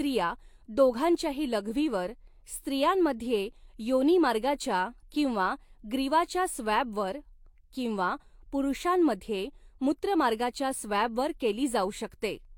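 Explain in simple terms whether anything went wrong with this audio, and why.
Nothing went wrong with this recording, as no technical fault can be heard anywhere in it. The speech comes through steadily, without any dropouts, glitches or sudden changes in the sound.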